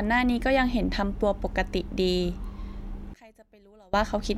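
A short speech recording loses almost all of its level between 3.14 and 3.94 s, falling about 30 dB so the voice nearly disappears before returning. The likely cause is one channel inverted: with one side's polarity reversed, the centred voice cancels when the channels are summed to mono. On a waveform the envelope collapses to a thin sliver for those 0.8 s, and a spectrogram shows a faint band where the speech energy should be.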